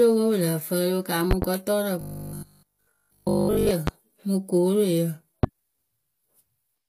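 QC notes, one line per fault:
Throughout: HE-AAC compression. The treble above the coded band sounds synthetic, gritty and metallic on sibilants. It is likely rebuilt by spectral band replication at a low rate, one fitting roughly 24 kbps HE-AAC v2. Nothing is present above 15.5 kHz.
2.01–3.71 s, ending just before "mɨ kooroyǝ": robotic sound from repeated short buffers. The sound collapses into a rigid 50 Hz buzz that loosely follows the speech. The likely cause is a 20 ms buffer being replayed over and over while nearly all of the real audio is skipped.
1.31–1.45 s (two pops), 3.87 s (just before "mɨ kooroyǝ"), 5.43 s (just after "mɨ kooroyǝ"): loud pop. Sharp clicks or thumps land about 15 dB above the speech, which continues underneath. They are likely voltage spikes from a plug, switch, static or driver glitch, shaped by the circuitry that follows.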